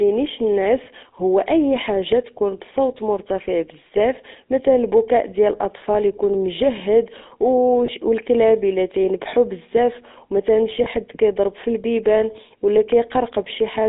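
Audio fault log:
Throughout: GSM full-rate codec. The speech has a buzzy, gravelly roughness because the codec rebuilds it from a vocal-tract filter driven by a regular pulse train, with the excitation coarsely decimated. That behaviour fits the 13 kbps full-rate coder, and the damage is plainly audible. The line passes only about 250 Hz to 3.7 kHz. On a spectrogram, energy stops sharply at those edges, and voiced stretches show smeared, grainy harmonics instead of clean striations.
0.84–0.88 s, 7.86–7.91 s, 10.84–10.87 s: lost GSM frames. At each point the decoder had no usable data, so it reused the previous good frame's parameters. For roughly 20 ms the sound freezes into a short metallic, rough ring, which points to a single lost frame each time. The waveform shows a brief patch of repeated periodic cycles. The spectrogram shows a thin vertical band of static, copied harmonics breaking the natural movement.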